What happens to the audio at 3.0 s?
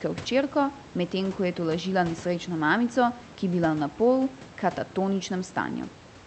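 Nothing goes wrong at 3.0 s: the speech carries on intact through that moment, with only the room noise underneath it and the ordinary character of the call codec.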